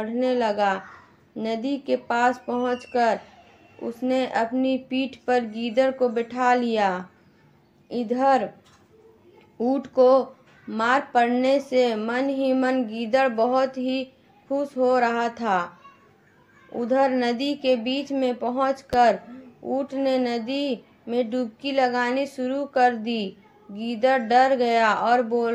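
A sudden voltage pulse, likely from a plug, switch, static discharge or driver glitch, enters the signal path between 18.93 and 18.96 s. It is heard as a single sharp loud pop, roughly 10 dB above the surrounding audio, which carries on underneath.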